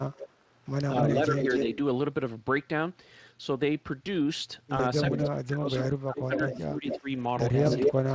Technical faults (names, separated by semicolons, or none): echo leak; speech suppressed in double talk; VoIP packet loss concealed by the speech codec